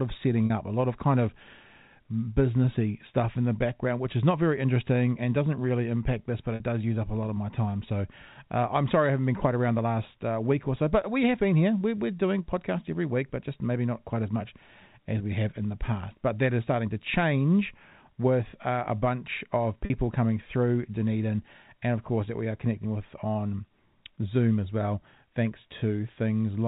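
Packet loss with pitch repetition at 0.46 s (40 ms, before "up a lot of"), 6.55 s and 19.85 s (50 ms each, after "really impact this but" and "uh a bunch of") in this telephone-band speech: the receiver repeats the last pitch period across each gap, leaving a brief held, buzzy tone.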